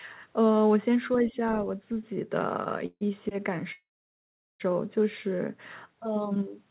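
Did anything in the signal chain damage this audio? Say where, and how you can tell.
Yes. Other side's voice leaking through at 1.14 to 1.18 s, a brief faint scrap about 25 dB below the talker. This is call processing: the echo canceller likely left a residue of the loudspeaker signal in the microphone path.

Speech suppressed in double talk from 1.27 to 1.36 s, where the talker's level dips by roughly 5 dB for about a tenth of a second. Call processing again: the echo canceller likely confused near-end speech with echo and attenuated both together.

Call audio freeze at 2.86 s, lasting 148 ms with about 40 ms of silence, and again at 3.72 s, lasting 874 ms with about 760 ms of silence. Sound resumes where it stopped, nothing lost. The network likely delayed packets and the jitter buffer ran dry, stretching the timeline. The G.711 A-law path, with nothing above 4 kHz, is audible as narrowband.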